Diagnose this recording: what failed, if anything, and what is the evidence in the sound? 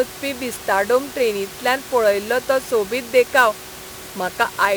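Sample clock jitter, throughout, at the converter. A hiss-like roughness swells on loud, bright speech and falls away in pauses, roughly 20 dB down. The sampling clock wanders by around 10 microseconds, so timing errors grow with the waveform's slope.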